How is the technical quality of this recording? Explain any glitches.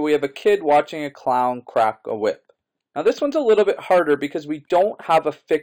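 The quality suffers from one fault present throughout. The imaging from linear upsampling comes from raising the rate by straight-line interpolation, which fits an 11 kHz source converted to 44.1 kHz. This dulls the top end and leaves faint mirror images, around 35 dB down, from roughly 5.5 to 11 kHz, heard as a light metallic shimmer.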